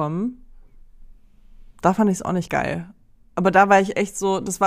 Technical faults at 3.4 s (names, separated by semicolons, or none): none